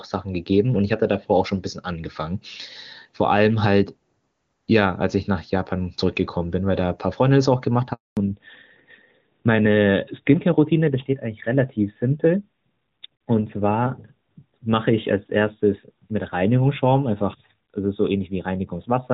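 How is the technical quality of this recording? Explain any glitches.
The call has two linked faults: a brief dropout in the speech followed by a permanent loss of high-frequency detail. Before the switch, the HD Voice (AMR-WB) coding sounds clean, with at most faint artefacts, which fits one of its higher bitrates.

Handover gap, 7.93 to 8.17 s: the speech cuts out for about 240 ms. The call was passed between networks, and no audio data arrived while the new link came up. The sound fades within a few tens of milliseconds, stays silent, then resumes.

Fallback to narrowband, from 8.17 s to the end: after the handover the call continues on the older narrowband AMR codec, likely at a rate near 12.2 kbit/s. Nothing above 4 kHz survives, so the top of sibilants and the airiness are lost and the speech turns duller and somewhat rougher than before.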